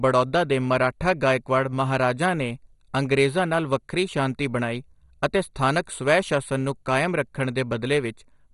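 MP2 compression runs throughout this speech clip: the sound is dull, with nothing above 11.2 kHz, and carries a heavy gurgling, granular distortion. The likely cause is MPEG Layer II coding short of bits, consistent with a rate near 56 kbps, switching off upper sub-bands and coarsely quantising the rest.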